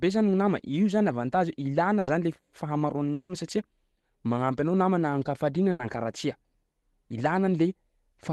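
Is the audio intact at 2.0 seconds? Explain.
No. Just after "nama io zany avantage", a burst of packet loss runs from 1.99 to 2.09 s. The receiver stretches the last sound for about 80 ms as a fading buzz or hiss rather than going silent, and speech then resumes with about 80 ms skipped.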